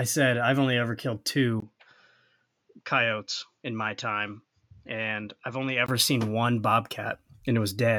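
The recording's input was likely switched to a poorer device from 1.60 to 5.88 s in this speech clip, right after "i've only ever killed" and returning before "seen one". With a 20 ms gap at the switch, the speech turns duller, with nothing above 7.2 kHz, drops roughly 5 dB, and carries a faint new background noise.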